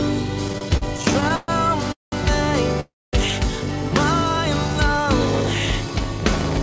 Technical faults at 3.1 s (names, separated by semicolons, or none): call audio freeze